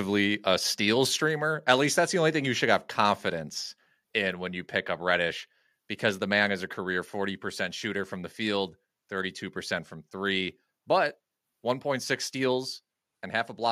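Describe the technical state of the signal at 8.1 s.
At 8.1 s the speech signal is intact, with no audible technical fault at that moment.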